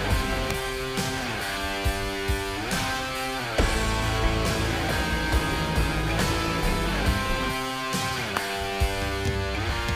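Two sharp snaps sit on top of the sound, one at 0.51 s and one at 8.37 s, each only a couple of milliseconds long and peaking around -10 dBFS. They are electrical switching spikes, likely from a nearby switch, motor or static discharge arcing and being picked up by the audio line. On a waveform each shows as a narrow vertical spike; on a spectrogram, as a thin full-height broadband stripe.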